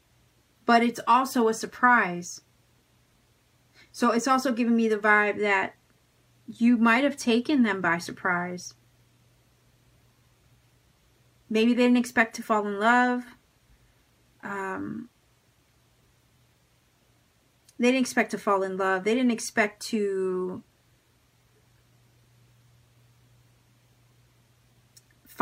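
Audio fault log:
Nothing to flag here; I listened all the way through and didn't catch anything technically wrong with it.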